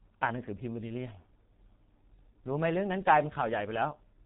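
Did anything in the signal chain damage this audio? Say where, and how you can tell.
Yes. A G.723.1 codec at the codec stage degrades the speech throughout: nothing passes above 3.9 kHz, so it sounds muffled, and the slowly updated voice model leaves it hoarse with smeared consonants. The heavy damage fits a bitrate near 6 kbit/s.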